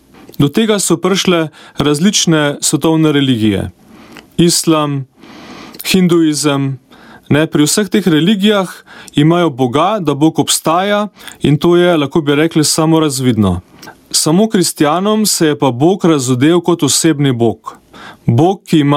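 Gain pumping runs the whole way through: the gain ducks by around 20 dB under loud moments, likely from input gain set far too high.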